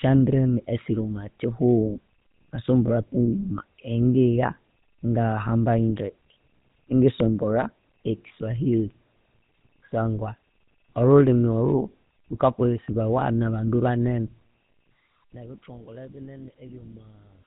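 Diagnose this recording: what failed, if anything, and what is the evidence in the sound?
The codec stage failed: the speech has passed through the GSM full-rate codec for its whole length, and the damage is plainly audible as a buzzy, gravelly roughness on every voiced stretch. The codec keeps a coarse vocal-tract model driven by a thinned pulse excitation, which fits a 13 kbps full-rate stream. On a spectrogram, everything stops sharply at 4 kHz and the harmonics look smeared and grainy.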